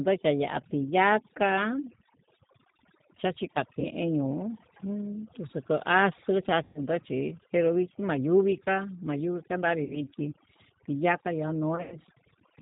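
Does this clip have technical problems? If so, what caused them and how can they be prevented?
Yes. Overdone noise removal runs throughout. Bands near the noise estimate are cut hard, leaving near-silent gaps with twinkling specks. Prevention: use gentler reduction settings and capture cleaner audio at the source.

G.729 codec coding is plainly audible throughout. Content above 4 kHz is missing, and the rebuilt speech sounds rough and synthetic, which fits an 8 kbit/s G.729A stream. Prevention: use a wideband codec with a higher bitrate where the network allows.

VoIP packet loss concealed by the speech codec occurs at 3.80–3.89 s (40 ms lost), 6.63–6.86 s (120 ms), 9.84–10.02 s (60 ms), and 11.76–11.98 s (120 ms scattered over 160 ms, longest run 100 ms). At each point the decoder extrapolates from its last pitch and filter with fading gain, and the speech stays weak or distorted for a short time afterwards. 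Prevention: reduce network loss with QoS prioritisation, or add forward error correction or redundancy.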